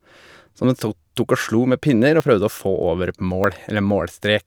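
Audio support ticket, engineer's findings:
Capture path likely not reading input buffers before hardware overwrote them: dropped buffer (overrun). Missing chunks spliced edge to edge, no gap. Speech jumps forward at 0.64 s (around 40 ms lost), 2.2 s and 3.44 s (around 20 ms each).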